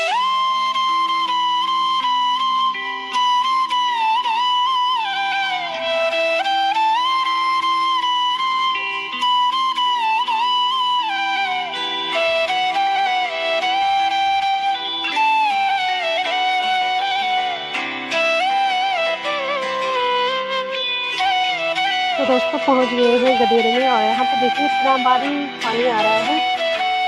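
No technical faults can be heard anywhere in the audio. Nothing in it breaks, drops out or shifts at any point.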